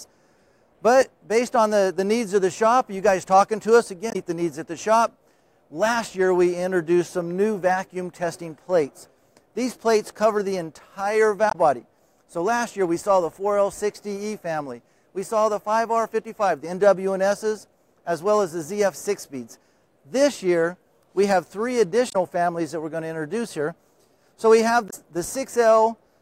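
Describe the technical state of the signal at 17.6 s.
At 17.6 s the signal is intact, with no audible fault at that moment.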